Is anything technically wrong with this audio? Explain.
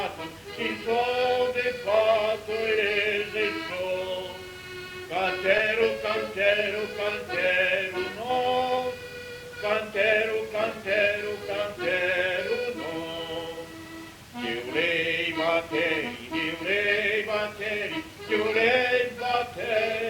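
Yes, there is a short concealed packet loss from 5.57 to 5.61 s. About 20 ms of audio never reached the decoder in time, so the receiver covered the gap by extending the preceding sound for roughly 14 ms and then blending back into the real signal. The patch sounds like a brief smear or wobble in the audio, a small seam where the continuous flow is momentarily blurred before clean playback resumes.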